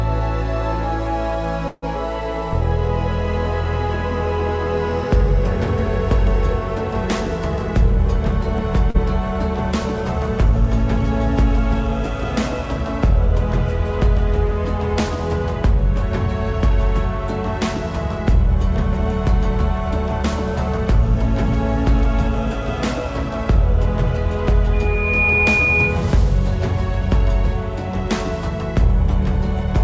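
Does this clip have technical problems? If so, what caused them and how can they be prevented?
Yes. From 1.68 to 1.85 s the sound stalls into a fading buzz that drops to near silence for its last 20 ms or so, then resumes exactly where it left off, with nothing skipped. This call audio freeze was likely caused by packets arriving late and the jitter buffer running dry, so the receiver stretched the last sound across about 144 ms and the delay grew by that amount. A network path with less delay variation, or a slightly deeper jitter buffer, prevents this.

At 8.90 to 8.97 s there is a brief smear where the sound wobbles and then blends back in. This is short concealed packet loss: about 40 ms of audio never reached the decoder in time, so the receiver extended the preceding sound to bridge the hole before crossfading into the real signal. Reducing packet loss on the link, or adding forward error correction, prevents it.

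From 20.23 to 21.49 s the sound runs slightly fast at an unchanged pitch, about 102% speed. This is a jitter buffer speed-up. The buffer had built up more audio than its target, so the receiver trimmed repeated short slices of a pitch period or so, about 40 ms in total, to bring the delay back down. Steadier packet timing prevents the backlog that triggers it.

From 24.73 to 26.06 s a single tone at 2.4 kHz swells over about half a second until it roughly matches the level of the rest of the audio. This is loudspeaker feedback squeal. The microphone was picking up the loudspeaker it drives, and at 2.4 kHz the loop gain exceeded one, so that frequency fed on itself. Using headphones, lowering speaker gain, or enabling echo cancellation and howling suppression prevents it.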